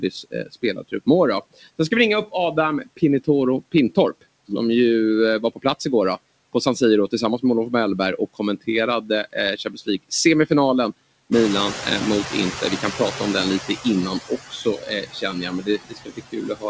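Throughout the clip there are noise suppressor artifacts. The background is pulled down by about 18 dB, frame by frame, so the noise sinks in the gaps and swells back under the speech. Because this residue tracks the rhythm of the talking, it is processing damage, not steady room hiss. Nothing reaches above 8 kHz, which points to a wideband call codec such as G.722.

From 0.0 to 4.51 s comes the first stretch of speech cut by the noise suppressor. Around 0.7 s in total is treated as noise and dropped by up to about 21 dB, so those sounds seem swallowed. This differs from the general artifacts: here the speech itself goes missing, not just the background. The same happens from 8.18 to 10.51 s, about 0.4 s in all, with drops of about 20 dB.

At about 11.5 s the room noise jumps by about 15 dB, ending roughly 11 dB below the speech. From 11.32 to 13.67 s the noise suppressor is catching up. 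For about 2.35 s the louder noise leaks through with only about 9 dB of reduction, then sinks as the estimate adapts. It is a gradual fade of the noise, unlike the sudden frame-by-frame pumping.

From 12.3 s to the end, speech is cut again, with quiet parts dropping by up to about 21 dB.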